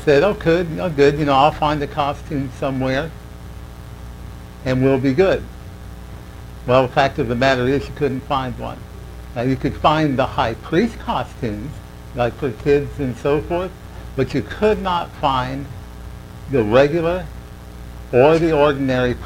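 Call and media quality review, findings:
Periodic clock jitter, whole clip. Rough, metallic edge riding on all sound content, gone in silences, harsher on high-frequency material. Probable component: converter clock picking up interference around 2 kHz, modulating sample timing and adding sidebands at that spacing around every component.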